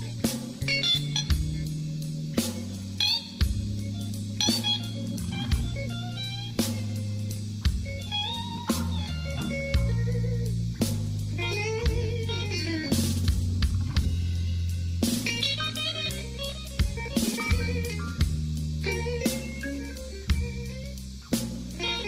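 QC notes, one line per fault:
Nothing stood out on listening.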